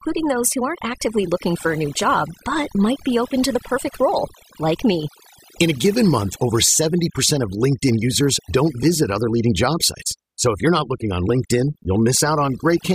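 Overdone noise removal runs through the whole speech recording, from start to finish. A noise reduction process set far too aggressively is cutting individual frequency bands down or out whenever their level sits close to its noise estimate, and the softer parts of the voice fall below that line along with the noise. The gaps between phrases collapse into near silence dotted with twinkling, chirpy specks.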